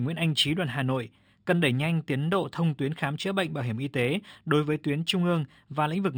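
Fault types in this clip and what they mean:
Imaging from linear upsampling: The speech was raised to a higher rate by joining neighbouring samples with straight lines. That is a weak filter. The top of the original band sounds dulled. A faint mirrored copy of the spectrum sits above it, from 6 to 12 kHz, which fits a 12 kHz source raised to 48 kHz. The copy is roughly 25 dB down. It adds a light metallic shimmer to sibilants throughout.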